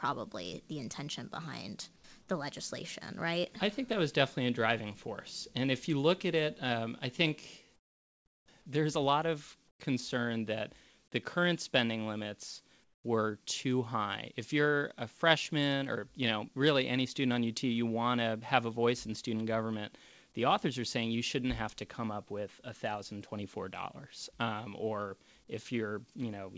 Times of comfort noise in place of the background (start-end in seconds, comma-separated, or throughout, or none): 1.96-2.04, 7.76-8.48, 9.68-9.80, 12.84-13.04